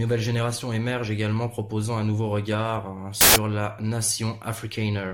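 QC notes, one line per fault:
3.21–3.36 s, samples built from the wrong bytes: for about 150 ms the speech is swamped by a harsh burst of loud broadband noise. The reader assembled each sample from the wrong bytes, whether off by one, in swapped order or with the wrong alignment, so the jittery low-order bits ended up as the big part of every value. That turns ordinary speech into loud hiss.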